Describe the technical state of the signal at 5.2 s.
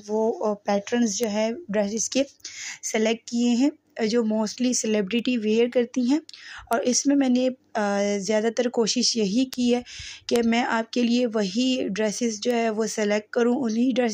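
At 5.19 s there is a bit error spike: a single sample has one bit flipped, so its value jumps by a power of two to about -16 dBFS and returns on the very next sample. It sounds like one short, sharp tick with no relation to the surrounding audio. On the waveform it shows as a lone vertical needle; on a spectrogram, as a thin vertical line spanning the full frequency range.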